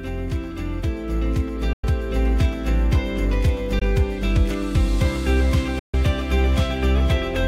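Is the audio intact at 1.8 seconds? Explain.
No. From 1.73 to 1.84 s there is a silent gap of about 100 ms, likely a Bluetooth dropout, where packets, perhaps five, arrived too late and were discarded. The waveform drops to a flat line with abrupt or briefly faded edges; the spectrogram shows a blank vertical band before the sound resumes as if it had played on.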